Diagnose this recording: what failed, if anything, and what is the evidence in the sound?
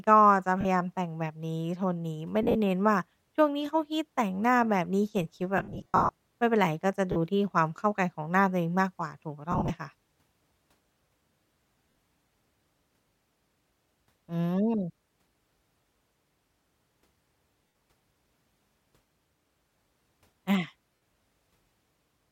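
The failure is in the wireless link: lost LE Audio frames, concealed by the LC3 decoder. Dropouts occur at 0.61, 2.43, 5.58, 7.12, 9.52, 11.92, 17.67 and 20.95 s, each 40 to 110 ms except at 5.58 to 6.11 s, where about 410 ms goes missing in bursts of up to roughly 70 ms. Each gap is filled by replaying the last spectrum with scrambled phase, so speech smears into noisy hiss that fades on longer runs. Light codec softening is also present.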